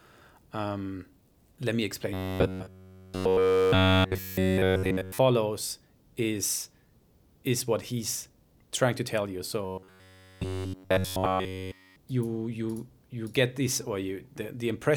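Robotic sound from repeated short buffers appears from 2.14 to 5.19 s, just after "let me", and again from 9.65 to 11.96 s, after "trying to tell you" and before "you you you get". Essentially all of the audio in each stretch is looped. The likely cause is audio arriving too slowly, so the same roughly 10.7 ms slice is replayed. This imposes a rigid 93.8 Hz metallic buzz that only loosely tracks the speech.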